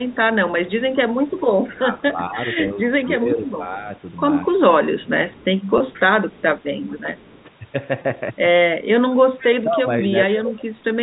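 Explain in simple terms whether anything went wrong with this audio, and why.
Several things went wrong, and they come in three kinds.

The first is echo leak. A faint, delayed copy of the voice trails behind it, about 0.22 seconds late. You hear it from 0.05 to 1.79 s, from 3.03 to 3.53 s, from 5.29 to 7.44 s, and as a brief scrap from 9.39 to 9.45 s. It is quiet. The likely cause is a loudspeaker on the far end. Its echo canceller missed part of the sound its microphone picked up, and sent it back.

The second is speech suppressed in double talk. Here the voice dips and thins out in pieces. This happens from 1.78 to 3.89 s, from 4.43 to 5.12 s, and from 9.64 to 10.66 s. In the first stretch about a second of speech is affected in total, and in the last most of a second. The echo canceller seems to have treated the talker as echo while both sides spoke, and turned them down.

The third is packet loss with pitch repetition. 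Three tiny gaps occur, at 2.68 to 2.70 s, 5.78 to 5.80 s, and 8.02 to 8.04 s. Each lasts about 20 milliseconds, which fits one lost packet. The receiver filled each gap by repeating the last bit of voice. That gives a brief held, slightly buzzy sound.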